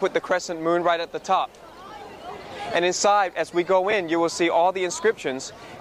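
A brief noisy smear replaces the sound at 1.88–1.90 s and again at 3.91–3.93 s. These are lost LE Audio frames: the LC3 decoder filled each gap of about 20 ms, which fits two lost frames, by reusing the last spectrum with random signs.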